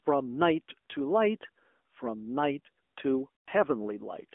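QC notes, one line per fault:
throughout: AMR narrowband mobile codec. The call passed through a narrowband mobile speech codec, consistent with the 10.2 kbps AMR-NB mode. It rebuilds each stretch of speech from a vocal-tract model and a sparse pulse excitation rather than sending the waveform itself. The speech is confined to a telephone band of about 250 Hz to 3.5 kHz, with nothing above it. The coarse excitation gives the speech a plainly audible buzzy, synthetic edge.
1.78 s: lost AMR speech frames. One frame, 20 ms of audio, failed to arrive intact. The decoder filled the gap by repeating its last good pitch and vocal-tract settings at reduced gain, which produces a brief dip or warble in the speech.
3.41–3.49 s: lost AMR speech frames. A run of lost frames, about 100 ms, most likely from radio errors that corrupted the frames. The decoder kept repeating the last good settings with falling gain. 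The sound smears out and fades toward silence across the gap, and the speech returns briefly weak or rough as the decoder recovers.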